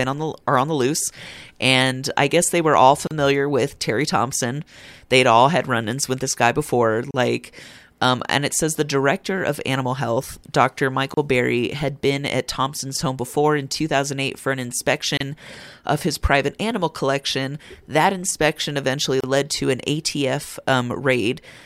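Gaps at joins of encoded pieces break this speech clip at 3.07, 7.11, 11.14, 15.17 and 19.20 s, every 4 s, each 32 ms (36 ms for the first). Separately encoded chunks were joined untrimmed, leaving encoder delay and padding as smeared silences.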